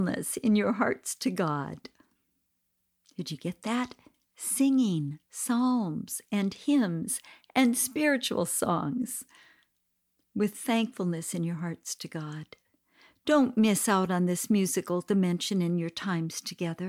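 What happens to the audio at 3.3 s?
At 3.3 s the speech carries on intact, with no dropout, click, distortion or other fault at that point.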